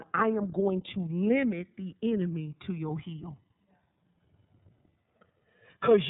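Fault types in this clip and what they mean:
Channels drifting apart: the two channels run on slightly mismatched clocks, about 300 parts per million apart, so their offset grows to roughly 2 ms by the end. Summed to mono, this gives slow flanging. A spectrogram shows dark comb notches sliding steadily.
iLBC codec: the speech sounds plainly rough and somewhat synthetic, which fits iLBC's 30 ms frame mode at 13.33 kbps, coding each frame independently. A spectrogram shows a hard ceiling with nothing above 4 kHz.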